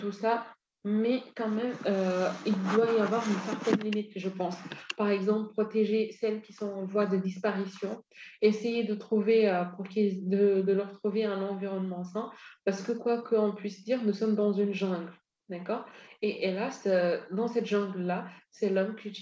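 No technical faults can be heard anywhere in this speech clip. It has passed through a WebRTC call path that is working normally, and the absence of anything above 8 kHz points to a wideband call codec such as G.722.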